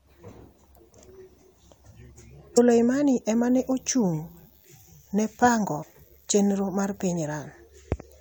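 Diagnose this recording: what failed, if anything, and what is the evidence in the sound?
Damaged data in a compressed stream, at 2.57 s and again from 5.82 to 5.84 s, in the codec decode stage. Each event is a brief disturbance, about 20 ms long, breaking into the speech. Part of the compressed stream was corrupted: bytes lost, zeroed or overwritten. The decoder misreads those frames, loses sync and briefly outputs garbage while it hunts for the next valid frame header, then resumes clean decoding.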